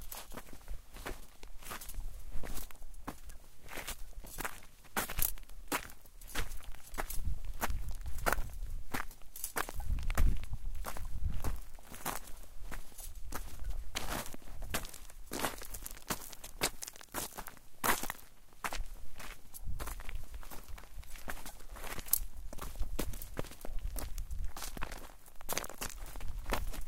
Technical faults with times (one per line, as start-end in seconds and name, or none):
0.00-14.04 crude rate conversion